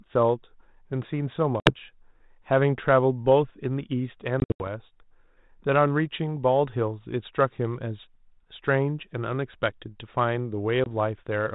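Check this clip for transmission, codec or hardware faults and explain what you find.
Three dropouts from packet loss on an ADPCM call are audible in this speech, on a G.726 link at 32 kbit/s with light coding noise. At 1.6 to 1.72 s about 60 ms goes silent. At 4.4 to 4.68 s about 160 ms is lost in pieces spread over 200 ms, the longest gap 80 ms. At 10.84 s a single 20 ms hole. Each loss is filled with silence, and the decoder's adaptive predictor and step size drift from the sender's. After each hard-edged gap the speech returns slightly distorted, then settles within some tens of milliseconds.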